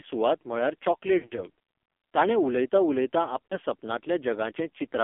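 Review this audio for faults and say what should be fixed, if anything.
Speech throughout sounds thin, buzzy and synthetic, confined to roughly 250 Hz to 3.5 kHz with nothing above. This is heavy AMR narrowband mobile codec damage: the vocal-tract model, fed very few bits (consistent with the 5.9 kbps mode), cannot rebuild natural texture. Using a wideband codec or a higher AMR mode would prevent it.

Just after "सुवात म्हळ्यार", from 1.18 to 1.45 s, the speech stutters with brief warbles and dips, the longest a 60 ms stretch that smears and fades before recovering roughly. A shorter dropout at 3.46 to 3.57 s sounds similar. Both are lost AMR speech frames, about six spread over 0.2 s, then likely two. Radio errors corrupted them, so the decoder repeated the last good settings at falling gain. Better radio coverage or stronger error protection on the link would prevent this.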